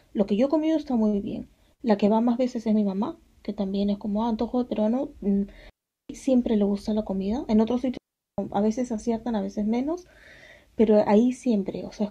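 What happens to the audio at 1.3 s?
Nothing goes wrong at 1.3 s; the audio is intact there.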